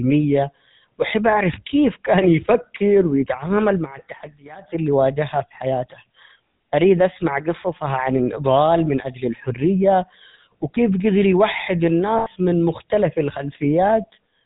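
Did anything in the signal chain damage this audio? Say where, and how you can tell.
Yes. The GSM full-rate codec damaged the whole clip at the codec stage. The speech has nothing above 4 kHz and a plainly audible buzzy, gravelly roughness. The codec models the vocal tract and drives it with regularly spaced pulses, keeping only every third excitation sample, which fits a 13 kbps coder.

Lost GSM frames appear from 12.18 to 12.28 s, a network-stage fault. For about 80 ms the sound hangs as a rough, metallic ring. The decoder kept repeating the last good frame's settings, which fits four dropped 20 ms frames.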